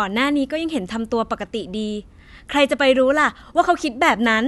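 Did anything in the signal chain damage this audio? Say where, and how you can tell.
No, nothing in this speech recording stood out on listening as damage from any stage of the signal chain.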